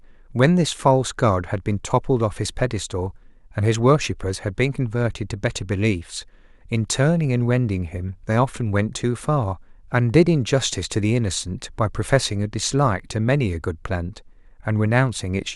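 No technical faults can be heard in this recording.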